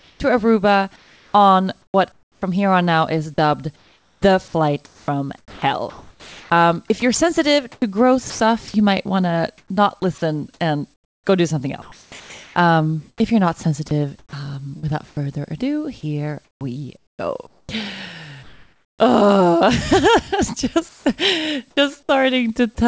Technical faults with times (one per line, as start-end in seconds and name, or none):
0.00-2.42 sound chopped by the voice detector
3.34-8.74 sound chopped by the voice detector
9.58-15.17 sound chopped by the voice detector
16.45-18.99 sound chopped by the voice detector
20.89-21.77 comfort noise in place of the background
21.71-21.77 sound dropped by the voice detector